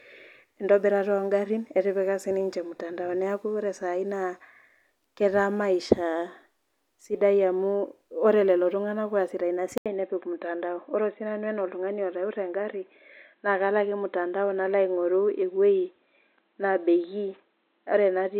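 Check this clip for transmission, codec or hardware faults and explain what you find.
One fault is present. At 9.78 s, after an 80 ms silence, the input switched to a poorer device, likely a narrower-band microphone or headset profile. From there to 18.39 s the speech sounds dull and boxy, with nothing above 4.1 kHz and a faint new noise floor. The level stays about the same. A spectrogram shows a short gap, then the upper band abruptly cut off.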